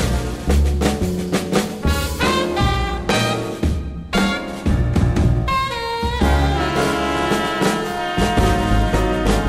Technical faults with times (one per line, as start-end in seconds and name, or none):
0.00-9.49 crude rate conversion